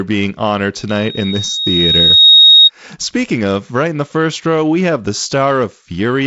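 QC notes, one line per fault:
0.89–2.70 s, loudspeaker feedback squeal: Right after "being honored" a pure tone near 3.8 kHz swells over roughly a second and a half until it sits around 10 dB above the speech. Some microphone was hearing its own loudspeaker, and at that one frequency each trip round the loop came back louder. A spectrogram shows one bright horizontal line thickening inside the wideband telephone band, which stops near 7.7 kHz, and the waveform envelope grows steadily.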